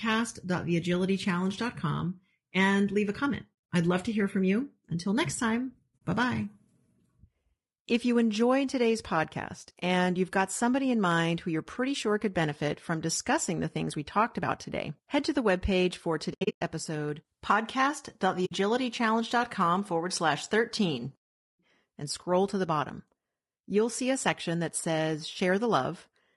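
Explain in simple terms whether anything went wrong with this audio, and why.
Throughout, the speech sounds rough and grainy, with a hiss-like texture between the tones of the voice and a thin, artificial-sounding top end. That is likely low-delay AAC compression, the kind used in video calls, squeezed hard. Unlike background noise, the grain follows the voice and comes and goes with it.

Several short holes appear where the sound fades out and back in smoothly: from 3.53 to 3.69 s between "and leave a comment" and "I'd love to hear", at 5.98 to 6.01 s between "next time" and "bye bye", from 16.33 to 16.62 s, and from 18.45 to 18.52 s. This is AAC frame loss with muting. Chunks of data went missing and were replaced with silence. The soft edges set it apart from a cut or a dropout, and the first and third gaps stutter in several small pieces.

At 13.31 s, after "sure could benefit from" and before "the things we talked", one peak brushes the ceiling and is flattened. 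That is hard clipping. It is a single tiny crackle on a loud moment, not a continuous fuzz over all the loud sounds.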